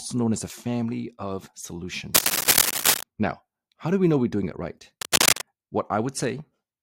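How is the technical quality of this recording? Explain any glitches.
Two bursts of cable scratch noise mar the recording, from 2.14 to 3.03 s and from 5.01 to 5.43 s. A worn cable or connector being moved is the likely cause: its contact resistance flickers, injecting dense, ragged noise that scratches over the sound, somewhat louder than the sound itself.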